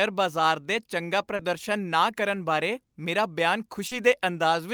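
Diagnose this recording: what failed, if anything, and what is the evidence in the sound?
Two brief smeared wobbles break the speech at 1.35 to 1.42 s and 3.87 to 3.94 s. This is short concealed packet loss on the network path: about 40 ms of audio arrived too late each time, and the decoder extrapolated the preceding sound before blending back.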